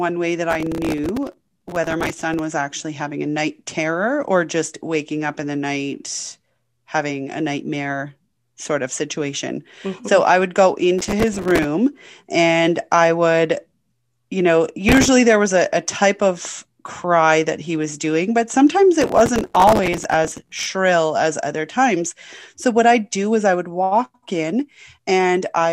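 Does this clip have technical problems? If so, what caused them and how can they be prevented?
Yes: processor overload crackle. The processor repeatedly missed its deadlines for very short buffers, and the gritty texture fits a buffer of roughly 3 ms. Each miss replayed a sliver of old audio with hard edges, and roughly 20 to 100 in a row made crackling tears over the speech at 0.50–2.39 s (after "way that"), 10.99–11.64 s, 14.89–15.08 s (after "you know") and 19.01–20.66 s (after "doing but sometimes"). Enlarging the buffer and reducing competing processor load would prevent it.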